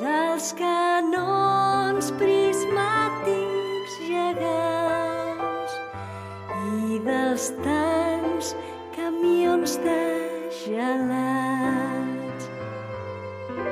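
No technical faults can be heard anywhere in the audio, and the signal holds steady throughout.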